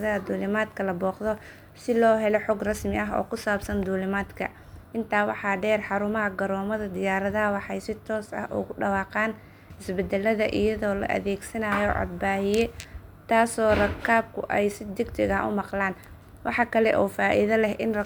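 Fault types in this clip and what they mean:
No technical faults are audible in this recording.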